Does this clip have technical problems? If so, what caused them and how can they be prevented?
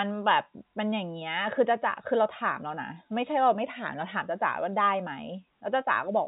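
No, there are no technical problems to fix here.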